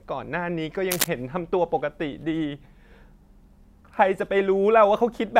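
From 0.91 to 1.09 s the speech is overlaid by cable scratch noise, a brief patch of harsh scratching and rustling sitting only a little below the speech level. It likely comes from a worn cable or connector being disturbed, its contact resistance fluctuating and injecting ragged noise bursts. On a spectrogram this shows as dense, irregular broadband streaks across the band; the waveform carries jagged, uneven spikes riding on top of the signal.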